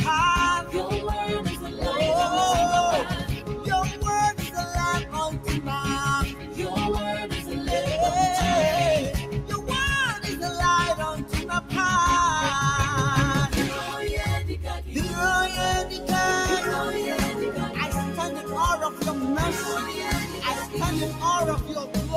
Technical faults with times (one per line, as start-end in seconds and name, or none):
0.00-22.17 noise suppressor applied to music or sounds
1.46-1.83 sound cut by the noise suppressor
3.20-3.67 sound cut by the noise suppressor
6.28-6.59 sound cut by the noise suppressor
7.34-7.52 sound cut by the noise suppressor
9.27-9.69 sound cut by the noise suppressor
11.19-11.73 sound cut by the noise suppressor
20.26-20.43 sound cut by the noise suppressor
21.63-21.96 sound cut by the noise suppressor